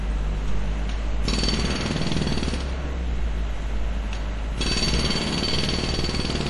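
Throughout the clip there is plainly audible MP3 compression damage, likely from too low a bitrate, around 48 kbps. Nothing survives above about 11.3 kHz, but unlike a simple low-pass filter, weak components flicker between frames, giving a watery swirl and smeared attacks.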